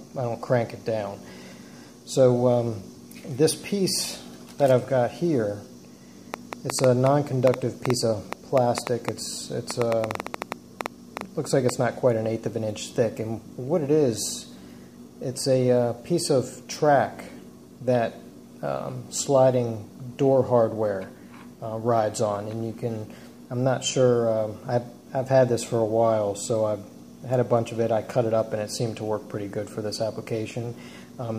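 Something in the signal chain, likely interference from nearby equipment or a faulty connection or power supply, injects a train of clicks from 6.34 s to 11.70 s. The pulses arrive at about 5.6 per second with irregular spacing, some thirty in all, each of much the same shape and standing roughly 15 dB above the surrounding audio. They are heard as uneven ticking or popping laid over the sound, carrying on through the quieter gaps as well.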